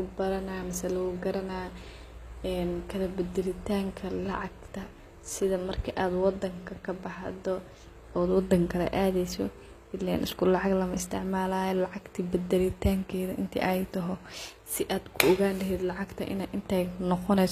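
Throughout the speech, s sounds turn gritty and metallic, likely from HE-AAC compression at a low bitrate near 24 kbps; spectrograms show copied, smeared treble ending sharply at 14.9 kHz.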